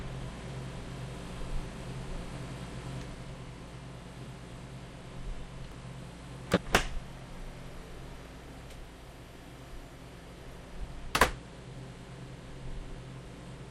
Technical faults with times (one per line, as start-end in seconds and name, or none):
5.72 dropped buffer (overrun)
6.57 dropped buffer (overrun)